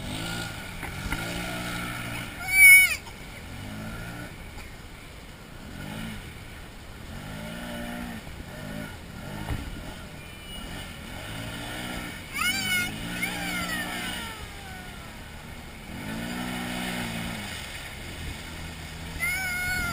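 Abrupt forward jumps occur at 3.20, 6.92, 17.60 and 18.39 s. The first two skip roughly 50 ms, the last two closer to 150 ms. The likely cause is a dropped buffer (overrun).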